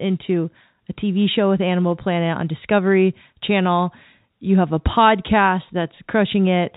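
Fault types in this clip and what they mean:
Nothing stood out on listening to this speech.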